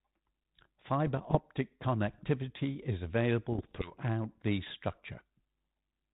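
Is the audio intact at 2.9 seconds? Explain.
Yes, the audio is intact at 2.9 seconds, with nothing there beyond the light coding of its G.726 ADPCM path at 32 kbit/s.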